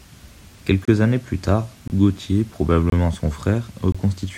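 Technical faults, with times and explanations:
0.85–0.88 s, 1.88–1.90 s, 2.90–2.92 s and 3.92–3.95 s, gap between chunks: the speech drops out for about 23 ms with hard edges on each side, once just before "années plus tard" and again right after it. The holes come once a second, which points to audio handled in 1-second chunks with a short stretch of silence inserted at each join, from padding or late playback of each chunk. Nothing is cut away, but the flow breaks at every boundary.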